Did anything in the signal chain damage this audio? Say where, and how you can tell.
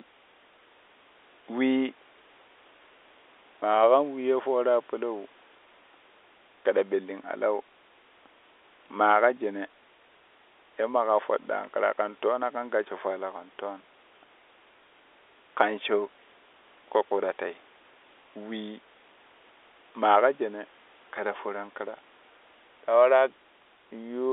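No, nothing in the signal chain damaged this audio.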